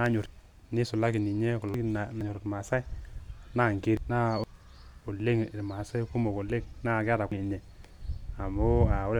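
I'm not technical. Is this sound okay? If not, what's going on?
No. At 0.26, 1.74, 2.21, 3.97, 4.44 and 7.32 s, compressed frames are skipped: the speech leaps ahead about 0.7 s.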